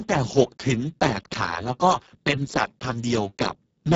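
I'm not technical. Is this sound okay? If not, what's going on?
No. Speex codec damage runs throughout: this old voice-chat codec, squeezed hard, leaves too little detail, so the speech sounds noisy and hoarse.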